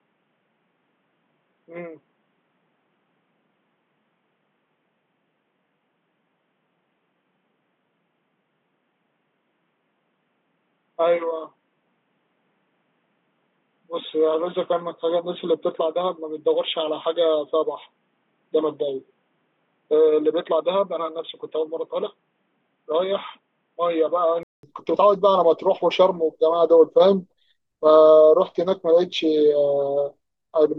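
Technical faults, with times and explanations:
0.00–24.63 s, input switched to a poorer device: boxy, quieter sound with spectrogram empty above 3.8 kHz, likely a narrowband input; a 200 ms waveform gap precedes fuller sound.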